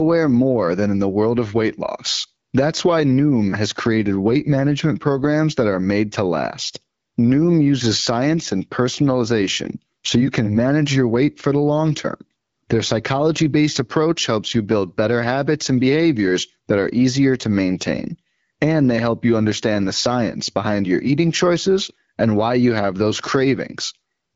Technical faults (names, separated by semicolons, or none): none